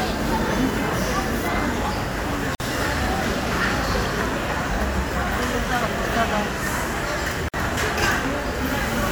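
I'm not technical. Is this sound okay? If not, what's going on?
No. At 2.55 s and 7.49 s the sound briefly drops out for about 50 ms, then resumes. This is a gap at a join of encoded pieces: separately compressed sections were stitched together, leaving each section's built-in silence in place.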